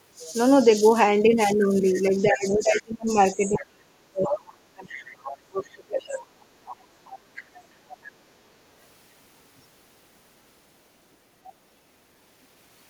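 Speech suppressed in double talk runs from 2.23 to 6.19 s, with a brief 40 ms dip at 6.82–6.86 s. The speech sinks by as much as about 35 dB, roughly three seconds in total, likely because the echo canceller couldn't separate this talker from loudspeaker echo and attenuated both. The other side's voice leaking through appears at 3.47–3.66, 4.24–4.38, 4.90–6.21, 6.66–7.42 and 7.89–8.08 s, from about 5 dB to about 25 dB below the speech, loudest near 4.3 s, likely echo residue the canceller left in the microphone signal.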